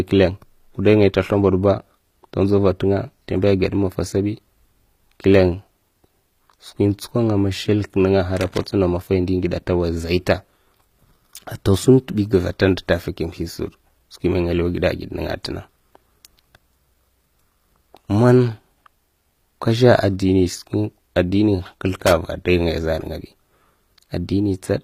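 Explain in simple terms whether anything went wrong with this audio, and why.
Loose connector crackle at 8.37 to 8.64 s and again at 22.00 to 22.13 s: a worn or dirty contact briefly lost and regained touch, chopping the signal into bursts of irregular scratchy crackle.

Throughout the speech there is plainly audible compression damage, likely from HE-AAC compression. Nothing is left above 15.5 kHz, and the treble is a rebuilt copy of lower bands, so s sounds come out gritty, metallic or lispy rather than clean.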